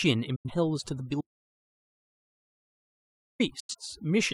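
Overdone noise removal runs through the whole clip. Bands near the noise floor are cut hard, so the background twinkles.

At 0.36 to 0.51 s, a digital broadcast dropout fades the sound out in about 8 ms. Roughly 85 ms is lost, which fits two failed frames. The same happens at 3.60 to 3.75 s.

From 1.21 to 3.40 s comes an audio dropout to silence. About 2.19 s goes to dead silence with no room tone. The input was likely lost while recording continued.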